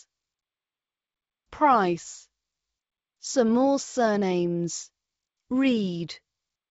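No technical faults can be heard in this speech recording.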